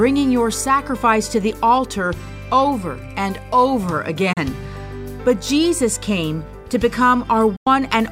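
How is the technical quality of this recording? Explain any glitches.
The recording has two short digital broadcast dropouts. At 4.33 to 4.38 s and again at 7.56 to 7.67 s, the receiver muted on bad or missing frames. The sound fades out over about 8 ms, leaving holes of about 32 ms and 96 ms that fit one and three lost frames, before returning.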